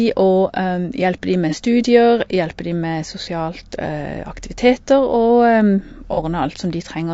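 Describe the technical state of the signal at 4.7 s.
At 4.7 s the speech carries the rough, grainy texture that runs through the whole clip, with noise filling the gaps between harmonics and a thin, synthetic-sounding top band. This is likely low-delay AAC compression (AAC-ELD), whose short frames resolve pitch harmonics poorly, consistent with a low bitrate around 32 kbps.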